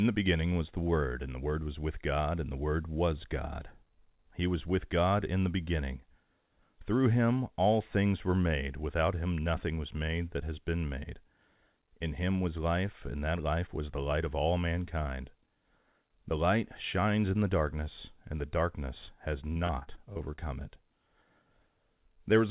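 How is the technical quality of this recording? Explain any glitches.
The recording is narrowband telephone-quality speech, with nothing above 4 kHz, which fits a G.711 call path. Two packet-loss glitches occur close together near the end.

At 19.06 to 19.09 s there is a brief smear where about 20 ms of speech is missing. This is short concealed packet loss: the audio arrived too late for the decoder, so the receiver extended the preceding sound to cover the hole and then blended back into the real signal.

From 19.53 to 20.40 s the speech turns choppy and robotic, with pieces dropping out. This is repeated packet loss. Eight separate gaps, the longest 38 ms and about 200 ms missing in total, were each patched by continuing the last sound, so about a quarter of the stretch is filled-in audio.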